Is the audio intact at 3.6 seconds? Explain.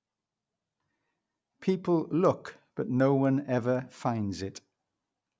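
No. From 2.25 to 4.0 s the resampler restarted on every block, converting 44.1 kHz to 16 kHz in 250 ms pieces with no shared edge samples, so each boundary carries a small error, heard as ticks at 4 Hz riding on the speech.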